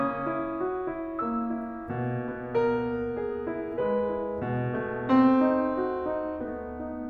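No technical faults can be heard anywhere in this music.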